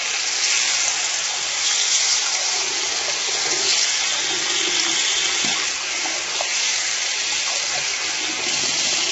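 From start to finish the sound is rough and grainy, with a hissy fizz filling the gaps between tones and nothing above 7.8 kHz. That's likely heavy low-delay AAC compression, AAC-ELD, whose short frames blur fine detail at a bitrate around 16 kbps.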